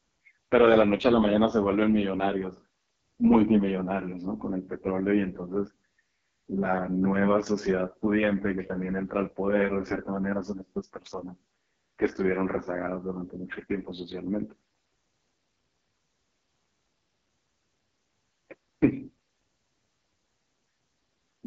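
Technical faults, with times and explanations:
Throughout, AMR wideband (HD Voice) codec: the speech has a rough, raspy, buzzy texture, and nothing sits above about 7.5 kHz. The sound points to AMR-WB at its lowest rate, around 6.6 kbit/s, where the pulse-driven vocal tract model has too few bits to follow the voice and the top band is filled with shaped noise. That raspy synthetic grain, rather than plain muffling or warbling, sets it apart from a simple low-pass or an MP3-style codec.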